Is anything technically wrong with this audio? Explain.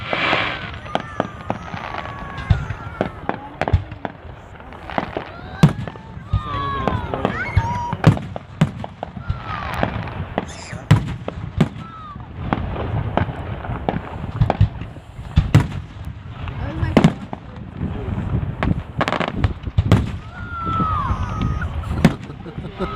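Yes. Two isolated sharp ticks cut through the audio, a louder one at 9.74 s peaking at about -8 dBFS and a fainter one at 16.05 s at about -20 dBFS. Each is a bit error spike: a single sample whose value was corrupted by one flipped bit in memory or on a digital link, jumping by a power of two before snapping back. That one-sample jolt spreads energy across the whole spectrum, so it clicks with no relation to the surrounding sound.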